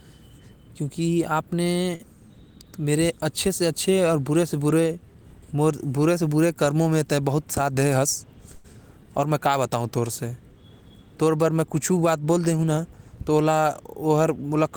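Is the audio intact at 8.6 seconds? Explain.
No. From 8.55 to 8.66 s one sound is held for about 88 ms longer than it should be, a brief drawn-out smear with a faint buzzy or dipped quality, after which the speech resumes from exactly where it left off. This is a short stall from a late packet. The packet arrived late, the jitter buffer ran dry, and the receiver stretched the last sound until it came. Nothing is lost, but everything afterwards sits 88 ms later.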